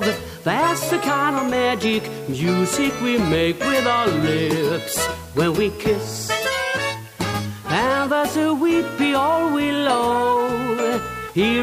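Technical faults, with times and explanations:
Throughout, low bit depth with dither: a constant, even hiss sits roughly 25 dB below the signal, consistent with about 7 bits where dither turns rounding error into white noise, not distortion. Spectrogram: a flat floor across all frequencies. Waveform: never truly silent.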